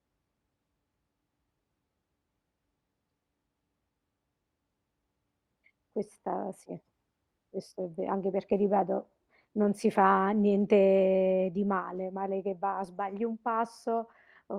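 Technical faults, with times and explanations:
Nothing here stands out as a technical fault, so there's nothing to flag in this speech recording.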